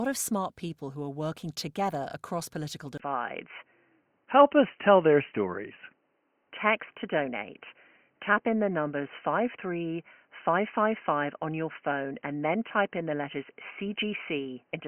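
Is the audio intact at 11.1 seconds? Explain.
No. From 2.98 s to the end, the sound is dull and boxy, with nothing above 3 kHz, a modest level shift, and a faint new noise floor after a 20 ms gap. This points to an input switched to a poorer device, likely a narrower-band microphone or headset profile.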